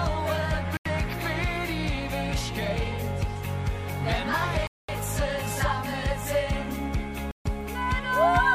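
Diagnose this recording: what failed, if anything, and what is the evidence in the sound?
Bluetooth stall, likely, at 0.77 to 0.86 s, 4.67 to 4.89 s and 7.31 to 7.46 s, at the wireless link and playback buffer stage. The sound drops to clean silence for about 85 ms, 215 ms and 143 ms, then resumes. Interference on the radio link appears to have delayed audio packets, so the receiving buffer emptied and output halted until retransmitted data arrived to refill it.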